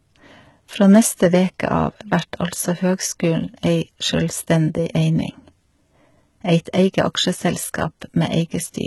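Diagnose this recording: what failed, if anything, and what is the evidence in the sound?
HE-AAC compression, throughout the speech, at the codec stage. S sounds come out gritty and lispy, and nothing reaches above 11.8 kHz. The treble is likely rebuilt by spectral band replication from copied lower bands, with heavy damage that fits roughly 16 kbps.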